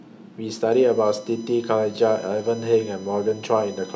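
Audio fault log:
0.72 s to end, USB whine: a fixed-pitch tone on a 1 kHz fundamental, strongest at its 6 kHz harmonic, sits roughly 25 dB below the speech. This points to 1 ms USB frame current leaking through power or ground. Unlike mains hum, it is high-pitched, not 50 or 60 Hz.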